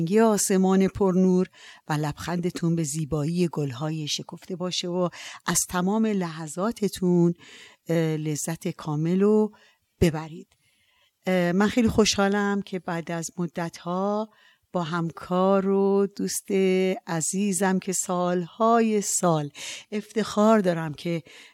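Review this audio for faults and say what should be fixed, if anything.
Nothing stood out on listening to this speech, so there is nothing here that needs fixing.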